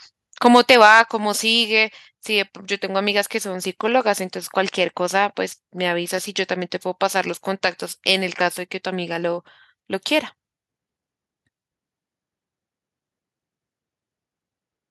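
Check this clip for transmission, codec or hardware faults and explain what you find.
Two linked input-side faults occur early in the speech, one right after the other.

From 0.45 to 1.01 s there is microphone overload. The loudest peaks crackle harshly, likely because the input gain drove the converter about 4 dB past full scale. On the waveform, the peak tops are flattened, and the spectrogram shows broadband smearing.

At 1.02 s, the microphone volume is stepped down. Voice and background drop about 5 dB at once, likely the call software cutting input gain after the clipping. The waveform envelope shrinks in a single step.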